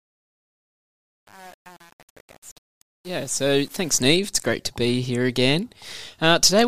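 Truncation distortion on a fade runs from 0.0 to 4.01 s, across the fade-in that opens the speech. The gain stage driving the fade keeps too few bits and adds no dither. The grit and stepping fit roughly 8-bit resolution. Near the quiet start, the waveform collapses into a handful of square steps, so the speech sounds gritty, staying rough until about 3.97 s before clearing as the level arrives.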